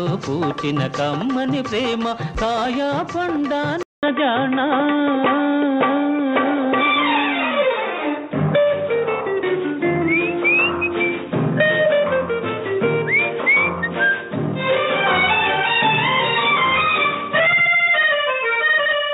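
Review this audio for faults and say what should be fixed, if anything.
At 3.83 s the sound drops out for 200 ms. When it returns, nothing is heard above 3.8 kHz, so it turns dull and boxy through to the end. The level shifts by about 5 dB, and a faint new noise floor sits well below the signal. This is likely an input switched to a poorer device, with a narrower-band microphone or headset call profile taking over. To prevent it, lock the recording input so the system cannot change devices mid-take.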